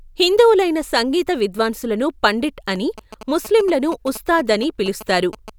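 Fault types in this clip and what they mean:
GSM signalling bursts: from 2.76 to 5.50 s, just after "హిందువులైన సంగీత విద్వాంసులను పండిట్", a galloping dit-dit-dit of short 217 Hz buzzes sits roughly 15 dB under the speech. A nearby 2G phone exchanging signalling bursts is being rectified by the audio circuit.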